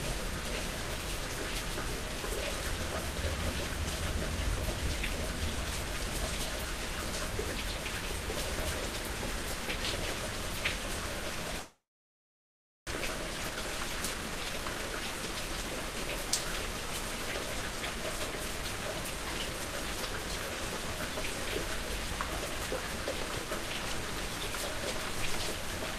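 From 11.59 to 12.93 s the sound decays into a fading buzz, then about 1.1 s of near silence, and resumes with roughly a second missing. This is likely a long network dropout, with the receiver stretching the last audio. A spectrogram shows smeared, fading bands, then a blank gap.

From 13.01 to 14.92 s a jitter buffer speed-up plays the audio at about 114% speed, with pitch unchanged, as the receiver trims tiny pitch-period slices to recover roughly a third of a second of delay. The waveform looks compressed in time, with hurried-sounding events.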